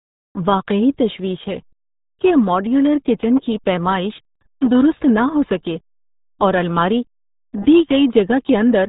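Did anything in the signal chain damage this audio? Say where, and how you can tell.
Yes, at the codec stage, and it runs through the whole speech clip. The spectrum stops dead at about 3.8 kHz, and the speech has the muffled, gargly texture of the RealAudio 14.4 codec applied heavily. The damage fits a bitrate of around 8 kbit/s. At that rate the encoder discards everything above a narrow telephone-like band and rebuilds the rest from a coarse model.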